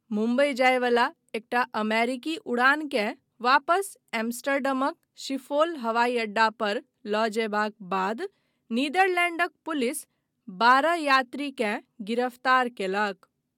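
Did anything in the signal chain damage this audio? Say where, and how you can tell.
No, nothing in the signal chain damaged this audio.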